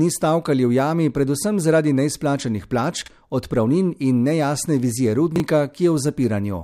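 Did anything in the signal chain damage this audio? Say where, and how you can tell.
Yes. At the buffer stage, the audio shows chunks out of order at 3.02 to 3.08 s and again at 5.36 to 5.40 s. Blocks of 20 ms were delivered late, one arriving two chunks behind its place and the other one chunk behind, so each plays after audio that should follow it. Nothing is missing, but the sound briefly jumbles. On the waveform, each spot shows three abrupt discontinuities, and the spectrogram shows vertical broadband streaks at those joins.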